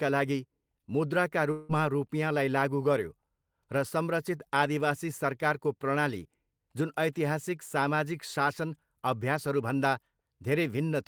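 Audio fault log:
1.51 to 1.72 s, long network dropout: the speech stops and the last bit of sound gets stretched into a buzzy, hissy tail for about 175 ms, fading the whole way but never reaching true silence. Then the speech picks up again with roughly 180 ms simply gone, so it jumps ahead rather than resuming where it left off. That pattern points to a likely stall in incoming packets, with the receiver papering over the gap.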